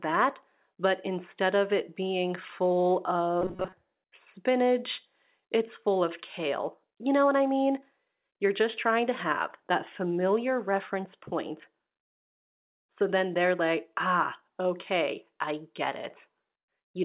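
From 3.42 to 3.74 s, between "of it being full" and "spinach it's full of", there is robotic sound from repeated short buffers. Most of that stretch is a rigid metallic buzz at 188 Hz, likely from a roughly 5 ms chunk being looped. That steady imposed pitch distinguishes it from a dropout's silence or a codec's warble.

From 4.04 to 4.12 s, just before "spinach it's full of", comfort noise replaces the background for 80 ms. The real room detail gives way to a flat, featureless hiss about 19 dB quieter, likely generated while transmission paused. Unlike a gate or mute, a synthetic noise floor remains. Throughout, the narrowband call path leaves nothing above 4 kHz.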